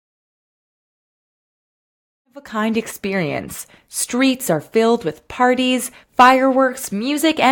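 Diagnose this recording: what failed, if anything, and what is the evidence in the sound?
Nothing failed at any stage: the only level change is an edited ramp-up of the speech from around 2 s to 2.92 s, smooth and free of any click or hard edge.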